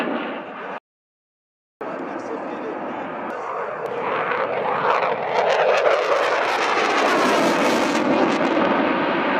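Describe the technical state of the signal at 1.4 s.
At 1.4 s the signal sits inside an audio dropout to silence running from 0.78 s to 1.81 s, about 1.03 s long. The sound cuts off abruptly into silence with no room tone, then resumes mid-flow, likely because the input was lost while recording continued writing silence.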